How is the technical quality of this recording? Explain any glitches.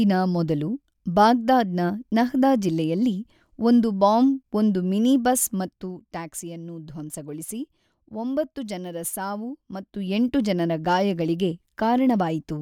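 Two glitches, both zipper noise, mar the recording. Zipper noise at 5.52 to 5.94 s, between "ಒಂದು ಬಾಂಬ್ ಒಂದು ಮಿನಿಬಸ್" and "ಟ್ಯಾಕ್ಸಿಯನ್ನು ಧ್ವಂಸಗೊಳಿಸಿ", and again at 9.82 to 10.2 s: the level drops by roughly 10 dB, then rises by about the same, in unsmoothed steps around fifty a second. Each jump clicks, giving a fast ticking buzz over the speech.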